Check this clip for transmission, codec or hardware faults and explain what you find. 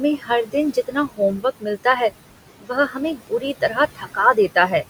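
Three kinds of fault are present in this speech recording.

Computer activity noise runs throughout. Load changes on the machine disturb the audio ground and produce a faint buzz pulsing around 100 Hz, roughly 35 dB below the speech. On a spectrogram it appears as evenly spaced vertical ticks.

Noise suppressor artifacts also run throughout. The suppressor pulls the steady room noise down by about 17 dB between phrases, so the background pumps. On a spectrogram the gaps look blotchy.

Speech cut by the noise suppressor happens from 0.18 to 1.86 s and from 2.61 to 4.72 s. In each span, about half a second of speech taken for noise drops by up to about 18 dB. These passages sound swallowed.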